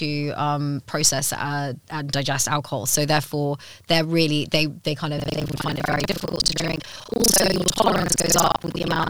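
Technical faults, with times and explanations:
5.16 s to the end: buffer tearing. A robotic 25 Hz buzz rides on the speech, which points to a 40 ms buffer period. The write and read positions have slipped, so about half of each period replays audio from roughly 70 ms earlier, with hard joins.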